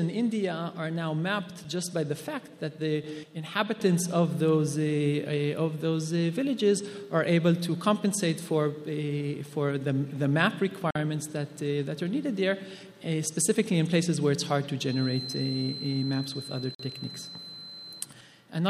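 At 10.91 s the audio drops out to a block of digital silence lasting about 46 ms, through 10.95 s. Most likely the output just didn't get filled in time, so that stretch went silent, which fits a 2048-sample buffer. There's no fade in or out, and at this length it comes across as a short, sharp hole rather than a single tick.

From 14.79 s to 18.12 s a feedback whistle sits behind the sound, a thin, steady tone at 4.1 kHz, roughly 15 dB under the main signal, swelling and fading slowly in level. It's likely the loudspeaker-to-microphone loop hovering right at the edge of feedback: one frequency keeps ringing but never builds into a full howl. While that whistle is still going, a second 46 ms block of silence hits from 16.75 s to 16.79 s, with the same buffer-sized gap as the first.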